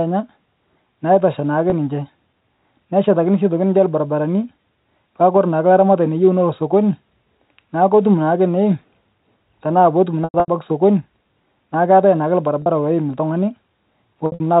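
At 1.70–1.72 s after "naitosha naake", 10.24–10.48 s after "tanaa pootum", 12.62–12.66 s after "keatae naake", and 14.26–14.40 s, packet loss with pitch repetition occurs. The receiver loops the last pitch period to fill the gaps, consistent with 20 ms packets. The short gaps sound like a brief buzzy hold. The two scattered bursts, with runs of up to 100 ms and 60 ms, fade toward silence. On a spectrogram these show as flat, repeated harmonic stripes that dim away. The band-limited telephone coding can be heard throughout.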